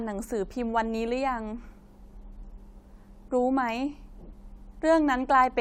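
Nothing technically wrong turns up in this bit of speech; there's no fault to point to anywhere in it.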